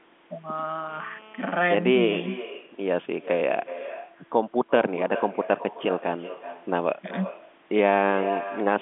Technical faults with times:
0.00-8.81 echo with no canceller
0.89-1.73 GSM phone buzz

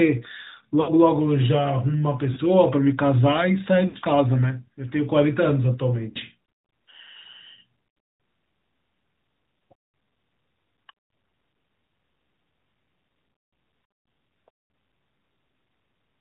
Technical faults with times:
0.00-16.20 AMR narrowband mobile codec
0.82-0.90 lost AMR speech frames
2.34-2.38 lost AMR speech frames
3.88-3.97 lost AMR speech frames
6.10-6.17 lost AMR speech frames
11.52 lost AMR speech frames

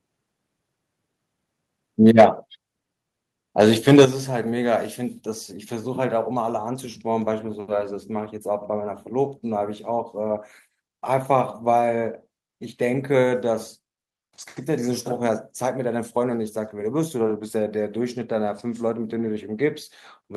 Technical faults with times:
2.06-2.26 microphone overload
2.21 microphone volume stepped down
3.60-4.04 microphone overload
4.05 microphone volume stepped down

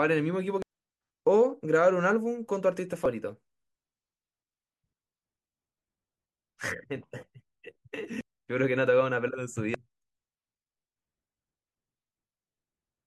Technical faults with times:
0.62-0.65 damaged data in a compressed stream
3.05-3.09 damaged data in a compressed stream
8.21 damaged data in a compressed stream
9.74-9.77 damaged data in a compressed stream

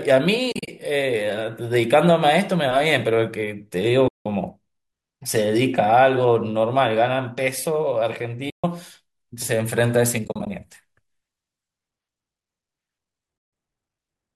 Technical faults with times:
0.52-0.68 AAC frame loss with muting
4.08-4.26 AAC frame loss with muting
8.50-8.64 AAC frame loss with muting
10.24-10.47 AAC frame loss with muting
13.38-13.53 AAC frame loss with muting

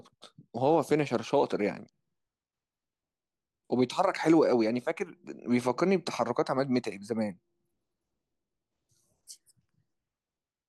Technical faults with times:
none

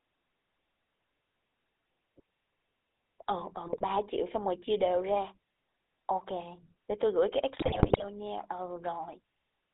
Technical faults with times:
0.00-9.74 GSM full-rate codec
3.66-3.85 GSM bit errors
7.54-8.05 GSM bit errors

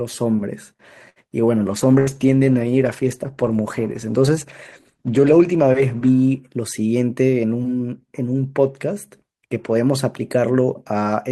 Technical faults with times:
1.09-1.19 short stall from a late packet
1.73-6.21 call bitrate drop
2.00-2.10 burst of packet loss
6.87-7.44 jitter buffer speed-up

